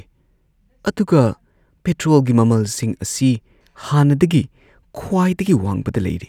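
A speech recording, with nothing technically wrong with it.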